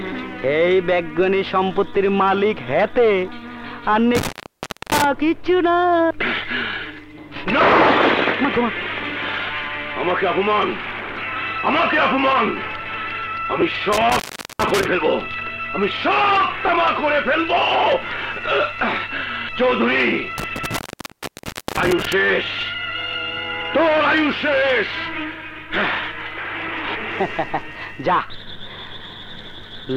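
At 4.15 to 5.04 s comes an intermittent contact. A loose plug or cable opens the line for about 0.63 s. The sound cuts out, with crackle at each edge and faint hiss in the gap.

At 13.61 s there are lost LE Audio frames. About 10 ms is missing, which fits one frame. The LC3 decoder fills it by reusing the last spectrum with random signs. The result is a brief noisy smear.

At 13.93 to 14.86 s the contact opens again, for about 0.40 s. At 16.67 to 16.69 s, about 20 ms of frames are lost, which points to two frames. That gap gets the same smeared fill. At 20.38 to 22.13 s the contact opens for about 0.99 s, with crackling edges and hiss throughout.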